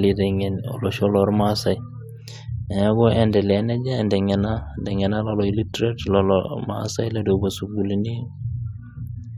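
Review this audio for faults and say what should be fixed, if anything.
No faults; nothing needs fixing.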